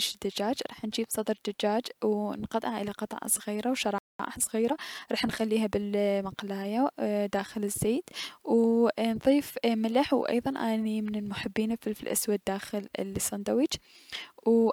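Speech plays normally until just after "الى قطع صغيرة و", when the audio goes completely silent from 3.98 to 4.19 s, a break of about 0.21 s. This is a playback stall, most likely the player running short of buffered data or its output thread being briefly blocked. Unlike a dropout, where a piece of the recording is simply lost, this is a pause in the output rather than a gap in the recording itself. Straight after the silence, from 4.19 to 6.29 s, the speech is hurried at about 1.1 times normal speed while its pitch stays where it should be. This is time-compressed catch-up: the player works off the backlog from the stall by cutting out small slices and cross-fading across the joins. That is what separates it from a plain speed-up, which would raise the pitch. Here the pitch stays put through those two seconds.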